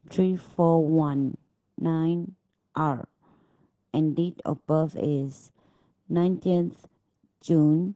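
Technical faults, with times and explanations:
Throughout: Opus voice compression. The speech sounds muffled and hoarse, with a slightly robotic, buzzy edge that never lets up. Nothing is heard above about 8 kHz, so consonants lose their crispness, and the voice texture is rough and grainy. This fits the SILK linear-prediction coder running in wideband at a very low bitrate, around 10 kbps. The excitation that drives the predicted vocal-tract filter is coded so coarsely that the voice's natural detail is heavily damaged.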